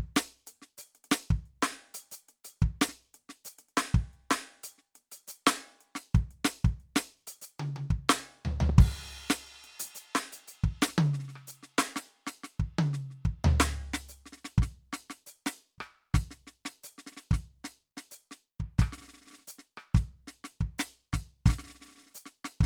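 A loud pop lands at 8.69 to 8.72 s, a single sharp crack standing around 10 dB above the music, which carries on beneath it. It is likely a sudden voltage spike, such as a switch or static discharge, briefly shaped by the circuitry downstream.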